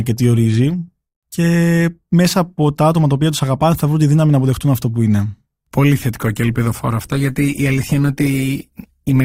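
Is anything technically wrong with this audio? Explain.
Yes, there is an adaptive stream at a lower bitrate from 6.15 s to the end at 9.25 s. The speech suddenly takes on more codec artefacts, which fits the stream dropping from about 64 to 16 kbit/s Opus after the connection slowed. The waveform shows no gap, but the spectrogram changes abruptly at 6.15 s.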